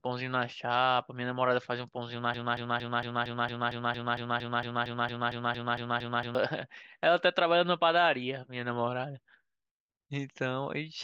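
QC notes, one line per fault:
2.34–6.35 s, broken-record loop: a 0.23 s fragment of the speech repeats exactly, back to back, 18 times, so the sound stutters in a rigid mechanical rhythm for about four seconds before normal speech resumes, and whatever should have been said there is gone. The likely cause is a stalled player or stream resending its last held buffer. On a spectrogram or waveform, an identical block tiles at a fixed 0.23 s period.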